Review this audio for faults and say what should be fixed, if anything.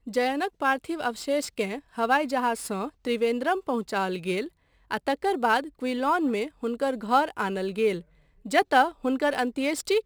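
Crude rate conversion runs through the whole recording: the speech was resampled, apparently from 48 kHz to 44.1 kHz, by simply keeping the nearest sample and dropping the rest, with no anti-aliasing or interpolation filter. That irregular dropping leaves a patterned error, roughly 30 dB below the speech, heard as a gritty, inharmonic fizz riding on louder and brighter syllables. Resample with a proper band-limited converter instead of nearest-sample picking.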